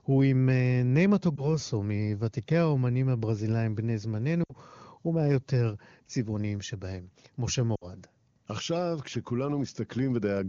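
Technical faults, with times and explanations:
1.36 to 1.46 s, 4.44 to 4.53 s and 7.75 to 7.86 s, lost AMR speech frames: at 1.36 s the speech briefly dips or warbles. The gap there fits a single 20 ms frame. At 4.44 s and 7.75 s the speech sinks to near silence, which fits about 60 ms of lost frames each. Radio errors broke the frame checksums, so the wideband decoder repeated the last good pitch and vocal tract settings at falling gain. The speech then resumes weak or rough for a moment. The clear AMR wideband (HD Voice) coding around these gaps fits 23.85 kbit/s.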